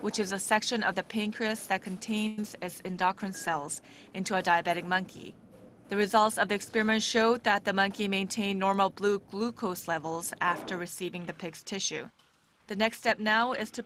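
Right at 2.27 s the audio stalls for about a tenth of a second in what sounds like a call audio freeze, likely late packets draining the jitter buffer, with the last sound stretched into a fading buzz or hiss before it resumes where it left off. Just after, at 2.42 s, there's a quick smear from short concealed packet loss, where about 10 ms never arrived and got patched over. From 2.84 to 5.19 s a call bitrate drop makes things rougher and duller, consistent with the encoder being squeezed from around 32 down to 18 kbps, sitting at the bottom for roughly a second. Then between 7.75 and 9.21 s a jitter buffer speed-up hurries the audio along at about 108% without a pitch change, trimming roughly a tenth of a second of backlog.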